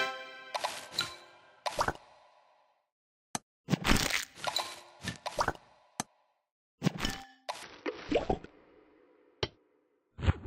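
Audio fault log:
7.63 to 10.46 s, section at the wrong speed: the sound suddenly drops to half speed, dragging out and sinking roughly ten semitones, with tempo and pitch falling together. That's likely playback or editing running this stretch against the wrong clock rate.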